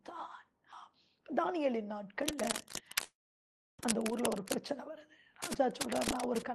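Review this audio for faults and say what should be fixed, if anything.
Cable scratch noise: From 2.21 to 4.56 s, and again from 5.42 to 6.42 s, a dense, uneven scratching and rustling sits over the sound, only a few decibels below it. The likely cause is a worn cable, connector or control being moved, so its contact resistance jumps about and injects bursts of noise. Replacing or reseating the faulty cable or connector, and keeping it still during recording, would prevent this.

Call audio freeze: Inside the first scratch, at 3.03 s, the sound stops and stretches into a short fading tail, then goes silent for about 0.66 s before resuming at 3.81 s. Nothing is cut out. The audio simply picks up where it halted, now running about 0.75 s late. This is likely delayed packets draining the jitter buffer, with the receiver bridging the wait before the late audio arrived. A steadier network connection, or a jitter buffer with more headroom, would prevent this.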